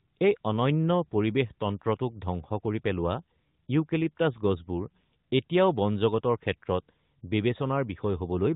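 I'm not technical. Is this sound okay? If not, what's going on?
Yes, it's fine: there's nothing wrong to point to in this recording, so there's no need to worry about it.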